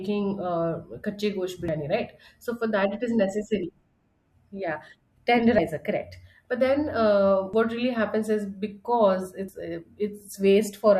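The speech skips at 1.68, 3.63, 5.58, 7.53 and 9.48 s. Each skip drops around 50 ms. The two sides join with no gap. The steady spacing points to audio missing between chunks, likely from a recorder working in 2 s chunks.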